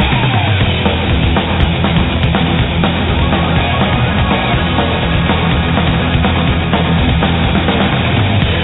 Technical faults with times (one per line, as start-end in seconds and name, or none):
none